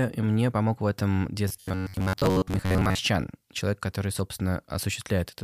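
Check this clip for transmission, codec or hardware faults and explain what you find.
One fault is present. Robotic sound from repeated short buffers runs from 1.48 to 2.99 s of the speech. Audio likely arrived too slowly, so the playback kept looping a short chunk, roughly 10.7 ms, in place of most of the missing material. That loop imposes a fixed 93.8 Hz buzz, turning the speech metallic and mechanical while its rough contour survives.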